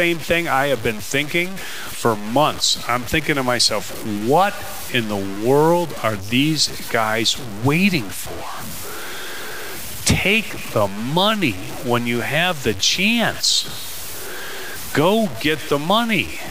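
Throughout the speech, a grainy distortion rides on every sound. It is not a steady hiss. It follows the signal and changes as the speech changes. Quiet passages turn gritty. The softest tails sputter or drop to silence. The error sits only about 15 dB below the speech, which fits a 5-bit signal. The likely cause is low bit depth without dither: samples were truncated to a few levels, leaving error tied to the signal.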